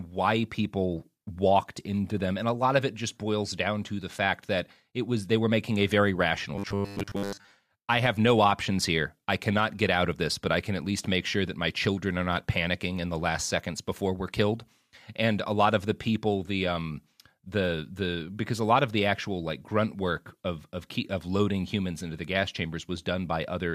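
From 6.56 to 7.54 s, robotic sound from repeated short buffers: a rigid 100 Hz metallic buzz, likely from 10 ms chunks looping most of the time, with no silent gaps as in dropouts.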